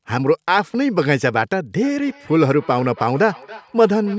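Feedback echo between two devices starts at 1.84 s and runs to the end of the clip. The speech comes back at a steady interval of roughly a third of a second, with the strongest repeat about 21 dB below the direct speech. A second device in the same room is playing the call aloud, and this microphone picks that playback up again. The local echo canceller removes only what its own device plays, so it misses this repeat. The call's microphone processing limits the band to 8 kHz.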